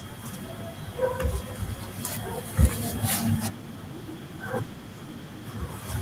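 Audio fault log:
2.62–2.65 s, microphone overload: the input gain was likely set too high, so a loud peak in the speech ran about 4 dB past the converter's full-scale ceiling. For this brief 30 ms stretch, roughly a third of the samples are pinned flat at the limit, their waveform tops sheared off. The squared-off shape adds sudden harmonics, heard as a short, harsh crackle riding on the loudest part of the syllable.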